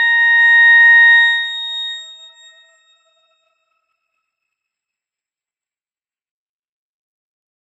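Nothing technically wrong can be heard anywhere in this audio. The sound gives no sign of trouble in how it was captured, processed or played back.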